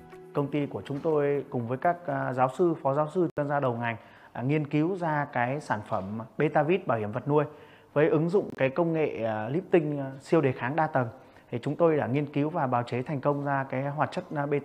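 At 3.30 to 3.38 s and again at 8.50 to 8.58 s, a corrupt frame muted fault cuts the sound to abrupt digital silence for about 82 ms, consistent with three damaged frames the decoder rejected. Unlike a skip, no time is lost, and unlike concealment, nothing is smoothed over.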